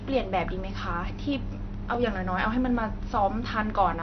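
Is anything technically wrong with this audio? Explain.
Yes, there are two problems. Throughout, the speech sounds dull and smeared with a fizzy edge, likely AAC compression at a low bitrate, where the encoder drops highs and thins out the spectrum. From 1.33 to 2.55 s, there are CD scratch ticks: seven short clicks, the longest a few milliseconds, where the player patched over data its error correction couldn't rebuild.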